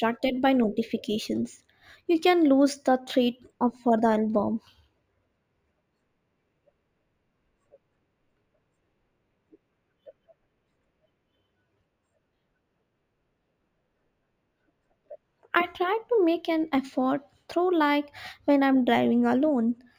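Across the whole speech clip there is imaging from linear upsampling. The audio was converted from 16 kHz to 44.1 kHz by joining samples with straight lines, which barely filters. Content near 8 kHz is softened, and a faint mirrored copy of the spectrum, roughly 35 dB down, fills the 8 to 16 kHz band, lending sibilants a thin metallic shimmer. Unlike a clean band-limited upsample, which would leave that region silent and simply dull, this adds brittle sparkle that tracks the speech.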